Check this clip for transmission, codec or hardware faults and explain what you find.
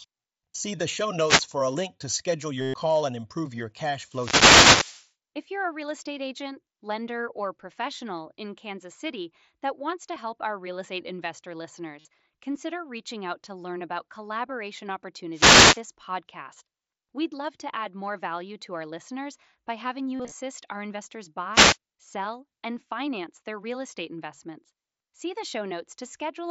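Two faults recur: wireless microphone noise hits and concealed Bluetooth headset packet loss. The audio runs through the mSBC headset codec, heard as a wideband 8 kHz limit with faint graininess on loud sounds.

Wireless microphone noise hits occur at 1.16–1.56 s, 4.03–5.12 s (just after "and improve your cash"), 15.32–15.82 s and 21.53–21.77 s. Reflections cancel the FM radio signal. Receiver noise surges. Each is a swish of static over the speech, the longest lasting about a second.

Concealed Bluetooth headset packet loss occurs at 2.61–2.74 s, between "a link to schedule" and "and improve your cash", where 120 ms is lost. The receiver repeats recent waveform, so a buzzy held tone replaces speech, then warbles on recovery. A 52 ms gap falls at 11.99–12.05 s, between "our real estate investor" and "consider reaching out to". A single 7.5 ms loss at 10.15 s is nearly hidden. At 20.17–20.34 s, shorter losses scatter over 180 ms, the longest 37.5 ms, giving brief buzzy flickers.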